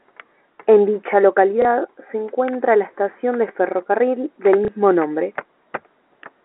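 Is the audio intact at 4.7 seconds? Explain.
No, right after "estación de ferrocarril del" there's packet loss with the last packet repeated, from 4.65 to 4.68 s. A 30 ms chunk went missing and the receiver replayed the previous one, so you hear a small blip.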